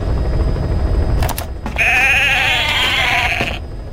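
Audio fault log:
No technical faults are audible anywhere in this audio.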